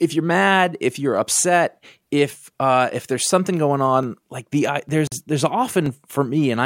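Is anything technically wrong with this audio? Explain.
Yes. At 4.03 s, just after "if there's something going", and again at 5.86 s, a single sharp click cuts through the speech. These are likely dropped samples: under a millisecond of audio goes missing, so the waveform jumps abruptly to a later value.

From 5.07 to 5.12 s, right after "like the", the speech stops for 45 ms with smeared edges, then resumes where it left off. This is a gap at a join of encoded pieces, where encoder start delay and final-frame padding were left in when separately encoded segments were joined.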